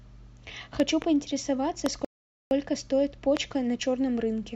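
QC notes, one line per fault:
0.80–1.04 s, 1.86–1.88 s and 3.37–3.39 s, loud pop: three hits sitting on top of the speech, with the first one being a quick double pop and the other two single. Each jumps about 15 dB above the speech around it, so they really poke out, and the speech keeps going underneath without a break. That sharp pop-or-thump character is likely a sudden voltage step or spike, from a plug, switch, static or driver glitch, getting into the chain.
2.05–2.51 s, rebuffering stall: the audio just drops to dead silence for about 0.46 s, then picks up exactly where it left off. Nothing is skipped; the clip simply gets that extra time added. That's the player running dry on downloaded audio and waiting for more to arrive before carrying on.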